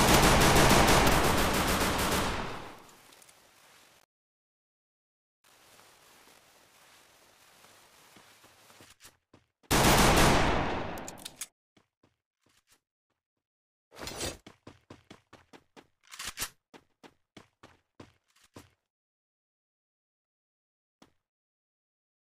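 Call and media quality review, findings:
Buffer tearing, 3.02–8.13 s: robotic 50 Hz buzz, present only while signal plays. Playback ring buffer, pointers slipped. Roughly 40% of each 20 ms period replays audio about 70 ms old, with hard joins on both sides.

Corrupt frame decoded, 10.81 s: brief blip. Codec decoder played damaged frames, a few consecutive ones affected. Flipped bits misread as gains and codes put energy at wrong frequencies.

Corrupt frame decoded, 20.99–21.05 s: short chirp, same mechanism, around two frames hit.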